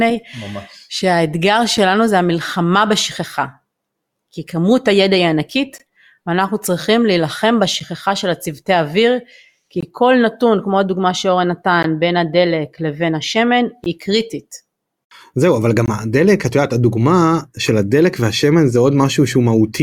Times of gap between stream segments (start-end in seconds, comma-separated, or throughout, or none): 1.77, 5.78, 7.80, 9.81-9.83, 11.83, 13.84, 15.86-15.88